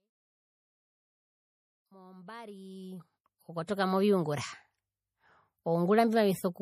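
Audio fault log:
Throughout, MP3 compression: plainly audible watery or swirly coding damage with nothing above 15.1 kHz, likely from low-bitrate MP3, around 40 kbps, dropping weak frequency lines frame to frame.
3.66–3.68 s, pre-echo: a 29 ms burst of hiss just ahead of an attack smears it, as quantisation noise spread across the block fills the quiet moment before the onset.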